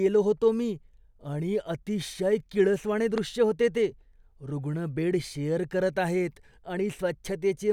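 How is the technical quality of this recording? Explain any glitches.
One glitch stands out: a single loud pop from about 3.18 to 3.20 s, just after "मी आणि अतिशय किळसवाणे" and before "होते ते". A sudden voltage step, likely from a connector, switch or static discharge, lands on the signal, giving a sharp click roughly 10 dB above the speech, which continues underneath.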